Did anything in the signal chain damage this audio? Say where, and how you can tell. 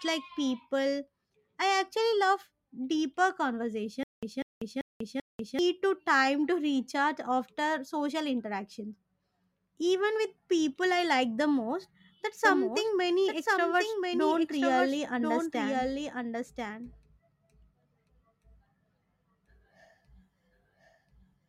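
Yes. There is a stutter with silent gaps from 4.03 to 5.59 s, just before "to time to recharge". A 196 ms fragment plays, then about 193 ms of digital silence follows. The cycle repeats every 389 ms, four times over. The stage is playback or its buffer. The likely cause is a stalled player or stream that replayed its last fragment on each retry and then ran dry. The audio meant for that span is gone.

A doubled audio track starts abruptly at 12.45 s, right after "like the most that's", and runs to the end. A second full-band copy trails the original by about a second. It sits about 5 dB lower. It carries no decay or room colour, so it is not an echo. The likely cause is the same signal captured again through a slower path, or an edit holding two misaligned copies.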